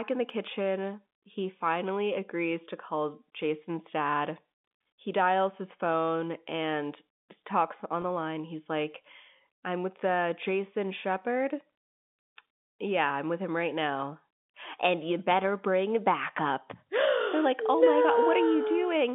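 Telephone speech runs through a narrow line band of roughly 200 Hz to 3.6 kHz, which fits G.711 coding. At 8.02 to 8.04 s there is a brief packet loss with pitch repetition. About 20 ms of audio goes missing, consistent with a single lost packet. The receiver fills the hole by repeating the last pitch period. The gap is short, so nothing fades to silence. Instead the sound holds for an instant and turns faintly buzzy before normal speech resumes. From 17.86 s to the end of the clip at 19.14 s, a mains buzz appears. It is built on 60 Hz, with a stack of harmonics that gives it a raspy edge rather than a smooth hum. It sits around 30 dB below the speech and stays steady. Sharp switching spikes from a dimmer, a rectifier or a poorly shielded cable produce this kind of buzz, twice in every mains cycle.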